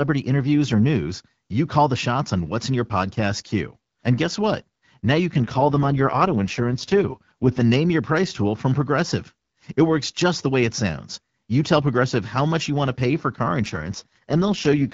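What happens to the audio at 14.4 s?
An AMR rate drop covers 14.4 s, running from 13.62 s, just after "to pay for car", to the end of the clip at 14.94 s. The link appears to force the wideband codec down from 12.65 to 6.6 kbit/s, giving up coding detail to protect the stream against errors. The bandwidth holds and nothing drops out, but the speech turns rough, raspy and synthetic, as the lowest AMR-WB rate sounds.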